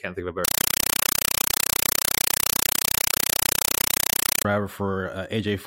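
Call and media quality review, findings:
Compressed stream played as audio, 0.45–4.45 s: loud chattering static replaces speech. Probable sink passthrough fault: AC-3 bitstream taken as PCM, never decoded. Waveform shows 5.33 ms noise bursts, zero-padded gaps, 31.25/s. Spectrogram shows evenly spaced broadband stripes.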